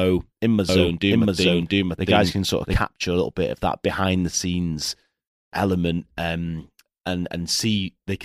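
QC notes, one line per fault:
0.69–2.75 s, doubled audio track: after "in my", the speech is joined by a second full-band copy trailing by roughly 0.7 s and at about the same level, so phrases overlap with a late duplicate of themselves. The copy has no decay or room colouring and cuts in and out abruptly, ending before "a little bit of". This likely comes from the signal being captured twice, once through a slower path.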